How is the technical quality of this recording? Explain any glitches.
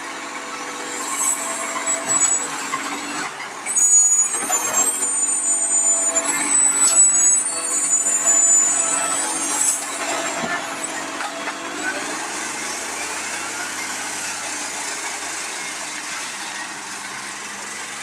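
The recording has one fault, present for its whole length. Throughout, a noise suppressor applied to music or sounds treats sustained tones, ambience and decaying tails as noise and pulls them down by around 10 dB while attacks pass through. The audio therefore pumps and thins out as each sound is held. Unlike compressor pumping, which follows loudness, this ducking follows how steady the sound is, so quiet transients survive while held material sinks.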